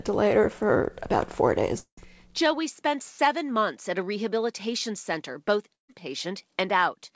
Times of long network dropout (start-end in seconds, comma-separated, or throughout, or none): 1.78-1.99